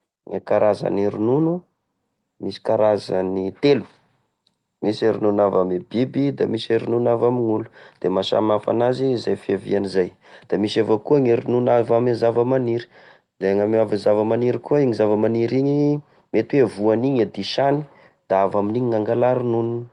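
Nothing goes wrong anywhere in this bit of speech, which comes over what sounds like an ordinary call link, with the top end easing off around 12 kHz, much as a typical Opus setup would leave it.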